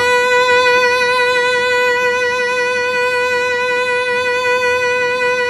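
Nothing goes wrong anywhere in this bit of music, so there's no fault to point to at any moment.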